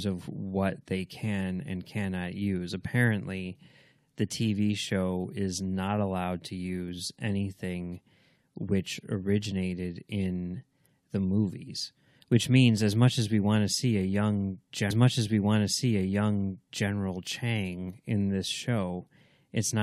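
A speech clip in which about two seconds of the programme play a second time: at 14.90 s the audio jumps back with a small blip and repeats until 16.89 s. This is a stream segment repeated, where the player fetched or queued the same chunk twice, adding 2.0 s.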